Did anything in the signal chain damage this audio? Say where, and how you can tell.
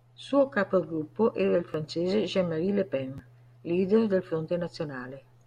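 Yes. The damage happened at the driver or buffer stage: twice, fresh audio failed to reach the output in time, so the device replayed its previous block of about 11.6 ms, which fits a 512-sample buffer. This repeated buffer is heard as a brief click-like buzz at 1.73 s, just after "capogruppo era il", and again at 3.18 s, just before "leader del". Each repeat plays once extra with hard joins, and roughly 10 ms of real speech is lost.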